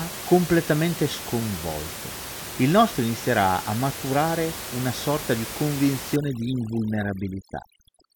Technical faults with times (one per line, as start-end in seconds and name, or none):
6.16-8.16 overdone noise removal